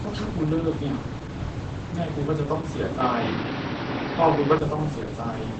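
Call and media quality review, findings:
Opus voice compression, whole clip: speech muffled, hoarse, slightly robotic. Low-bitrate SILK coding, which fits roughly 10 kbps, with coarse excitation. Spectrogram shows wideband ceiling, nothing above 8.6 kHz, and smeared, blocky harmonics in 20 ms frames.

Input switched to a poorer device, 3.00 to 4.58 s: tone turns duller and boxier, then clears. Likely a change to a narrower-band microphone or headset profile. Spectrogram drops to nothing above 5.9 kHz with no gap at the switch. Waveform level shifts by around 5 dB, and a new noise floor sits some 35 dB under the signal.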